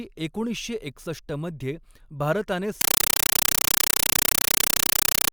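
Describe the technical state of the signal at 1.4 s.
At 1.4 s the speech signal is intact, with no audible technical fault at that moment.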